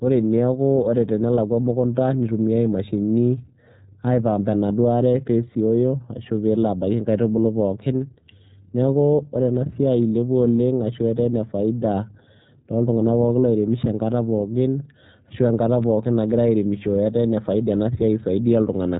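From start to end the speech carries iLBC codec damage: nothing passes above 3.8 kHz, so a spectrogram shows a hard ceiling there, and the plainly rough, synthetic texture comes from each frame being coded independently, which fits 30 ms frames at roughly 13 kbps.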